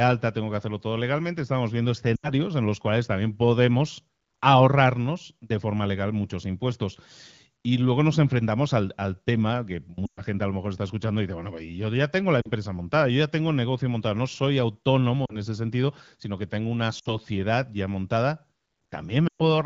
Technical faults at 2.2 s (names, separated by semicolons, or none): lost AMR speech frames